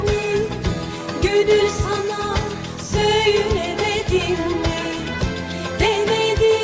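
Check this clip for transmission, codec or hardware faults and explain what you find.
Nothing stands out here; I listened for transmission, codec and hardware trouble and didn't hear anything to flag in this audio.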